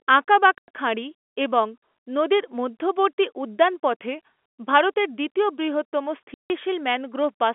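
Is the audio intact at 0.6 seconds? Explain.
No. At 0.6 s the speech sits inside a dropout from 0.58 to 0.68 s, caused by packet loss filled with silence. For 100 ms the receiver had no audio to play and output silence instead, a gap that fits five lost 20 ms packets. The speech stops abruptly, leaving a dead hole with hard edges in the narrow telephone-band sound.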